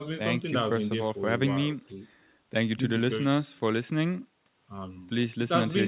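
No technical faults can be heard in this speech; it carries the band limit of a normal call path, with nothing above 4 kHz, which fits a narrowband telephone codec such as G.711 mu-law at 64 kbps.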